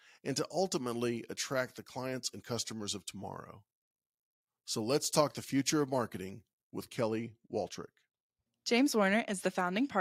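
From the start to 7.01 s, the speech carries pre-emphasis left on: the 50/15 µs treble boost was never undone by its matching de-emphasis, so highs stand about 8 dB above 1 kHz at 10 kHz, making the speech thin, glassy and hissing on sibilants.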